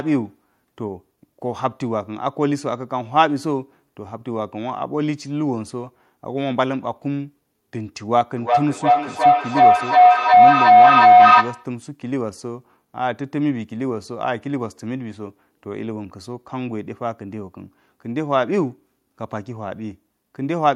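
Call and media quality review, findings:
Feedback howl, 8.37–11.84 s. Tone around 700 Hz swells to about 13 dB over the speech, loop repeat roughly every 0.4 s. Two devices in one room on the call: mic-to-speaker loop gaining each pass, so repeats grow instead of decaying. Stops when the loop breaks.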